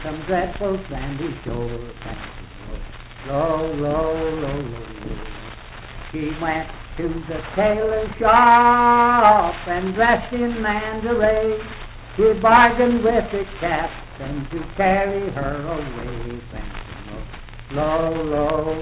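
No faults to report: the audio arrives over a call path with nothing above 4 kHz, which fits narrowband telephone coding along the lines of G.711 A-law, and nothing in it calls for comment beyond that band limit.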